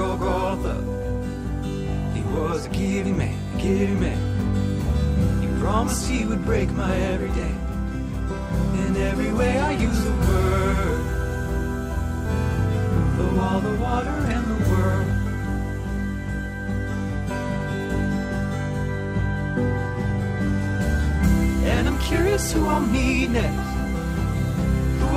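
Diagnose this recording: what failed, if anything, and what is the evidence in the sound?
A skip ahead at 12.25 s. The audio jumps forward with no silence or filler at the join, and around 0.7 s of material is missing, so the sound on either side butts together abruptly. This points to the network and jitter-buffer stage: a run of packets was lost in transit, or the buffer overflowed while later audio was already queued, and playback resumed from the newer audio, shortening the delay by the same 0.7 s or so.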